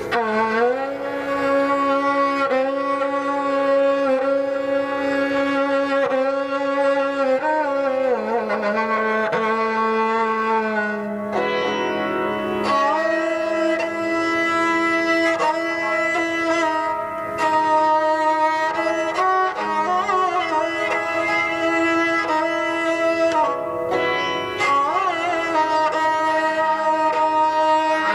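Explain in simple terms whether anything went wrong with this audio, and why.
Nothing went wrong here.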